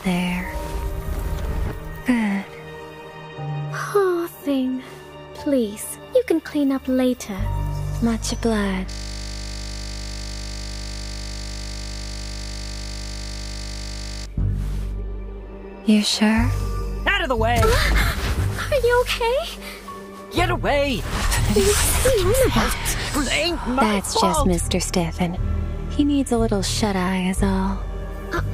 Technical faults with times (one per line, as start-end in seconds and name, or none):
8.90-14.26 system hang loop